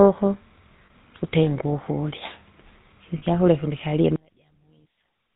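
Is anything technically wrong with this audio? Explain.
Yes, there are several problems.

Throughout the clip a faint, steady chirping warble sits far beneath the speech, flipping between pitches of roughly 1 and 2 kHz. This is timecode bleed: linear timecode from a neighbouring track or cable has leaked into the audio path. That code is a square wave whose two switching rates produce those pitches, and its rhythm fits 29.97-frames-per-second timecode. It is quiet but never stops, so it remains audible in pauses.

The speech itself is buzzy and gravelly, with a dull top end and no content above 4 kHz. That is the signature of the GSM full-rate codec, which the sound suggests was running at 13 kbps. The coder rebuilds the voice from a vocal-tract model excited by regularly spaced pulses and keeps only a sparse fraction of the excitation detail. The roughness comes from that coarse excitation, and the hard band limit removes the air and the upper part of the sibilance.

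At 0.86–0.91 s, just before "tutenge ukurya", at 3.18–3.23 s, just before "ikyakurya kundi kulie", and at 4.92–4.96 s, the sound briefly freezes into a rough, metallic ring. These are lost GSM frames, about 40 ms each. The decoder hid each gap by reusing the settings of the last good frame. A gap this short leaves a brief ring-like smear rather than being cut to silence.

From 4.16 s, right after "ikyakurya kundi kulie", to the end, the speech drops by about 24 dB, leaving only a faint residue. The likely cause is one channel inverted: with one stereo side's polarity reversed, the centred voice cancels when the channels are summed to mono. What remains is only the small difference between the two sides, which is why so little of the speech comes through.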